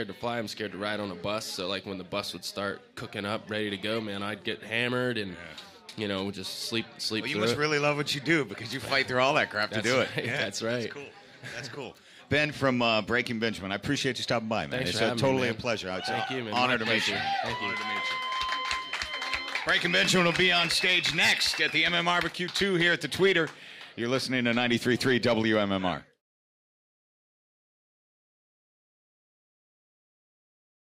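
No technical faults can be heard anywhere in this audio, so there are none to describe in time order.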